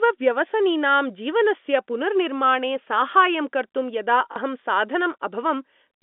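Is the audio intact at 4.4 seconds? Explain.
No. Packet loss with last packet repeated hits 4.32 to 4.36 s. A 40 ms gap, fitting two 20 ms packets, is filled by replaying audio, giving a buzzing stutter.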